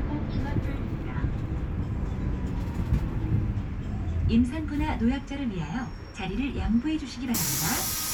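A recording of everyday sounds with nothing technically wrong to point out anywhere in it, so there's no fault here to explain.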